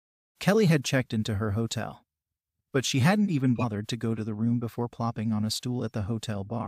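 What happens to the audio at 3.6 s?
Compressed frames are skipped between 3.55 and 3.64 s: frames the decoder never received or discarded as damaged go unplayed, so the speech jumps forward by about 50 ms. The splice is heard as a sudden jump in the speech.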